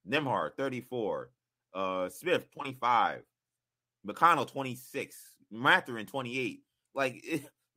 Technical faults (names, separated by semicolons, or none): none